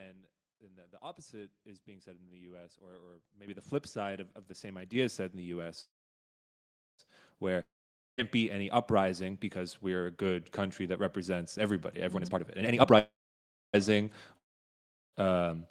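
At 3.48 s the speech and the background jump up together by about 10 dB, and again at 4.95 s, between "of of the same" and "is said in the", by about 5 dB. This is a microphone volume stepped up: the call software judged the input too quiet and raised the device gain in a single step.

From 5.81 s to 7.01 s the last sound smears into a fading buzz, then about 1.1 s of near silence, before the speech resumes exactly where it stopped. This call audio freeze was likely caused by delayed packets leaving the jitter buffer empty. It inserts a gap of about 1.17 s but loses nothing.

A third volume step, about 3 dB, comes at 7.14 s.

From 7.63 s to 8.20 s the sound again trails off into silence, returning at "be any uprising because". About 0.56 s of speech never plays. This long network dropout likely comes from packets that never arrived.

After "country that represents everybody", from 12.15 s to 12.98 s, the speech sounds hurried at unchanged pitch, running at 163% speed. 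In this jitter buffer speed-up, the receiver cut many pitch-period slices, roughly half a second in total, to shed excess delay.

A second call audio freeze follows at once, from 12.99 s to 13.75 s. It holds about 0.6 s of silence, with no speech missing. A second long network dropout runs from 14.37 s to 15.15 s, where about 0.76 s of speech is lost under near silence.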